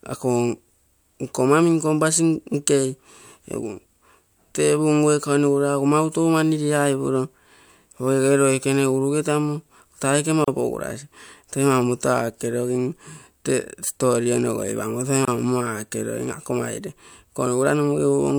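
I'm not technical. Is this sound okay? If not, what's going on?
No. At 10.44 s and again at 15.25 s the speech briefly drops into silence, for about 33 ms and 25 ms, then carries on where it stopped. This is a gap at a join of encoded pieces: separately encoded sections were joined without trimming the silent padding each one carries.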